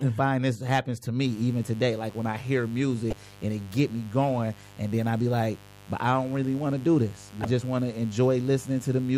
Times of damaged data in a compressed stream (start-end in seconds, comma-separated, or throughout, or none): 3.10-3.13, 7.42-7.45